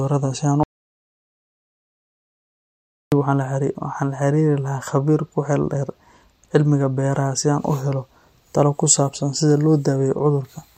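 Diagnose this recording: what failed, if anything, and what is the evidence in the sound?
The speech cuts off abruptly at 0.63 s and returns mid-flow at 3.12 s, leaving about 2.49 s of dead digital silence with no room tone at all. This audio dropout to silence likely comes from a lost input link or device, with the recorder writing zeros until the signal returned.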